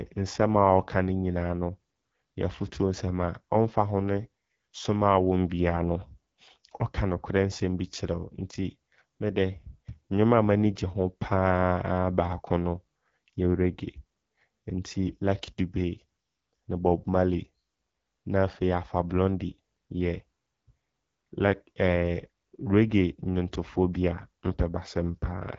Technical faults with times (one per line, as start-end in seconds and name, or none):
0.00-25.58 AMR wideband (HD Voice) codec